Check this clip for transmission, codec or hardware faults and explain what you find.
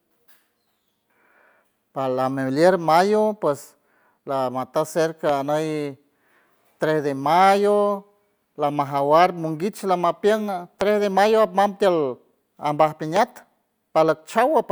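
There is one hardware fault: loud pops at 5.29–5.31 s, 10.81–10.83 s and 13.16–13.19 s, each a single sharp click about 10–15 dB above the speech, which continues underneath. Each was likely a brief voltage spike, from static or a switch, added to the signal.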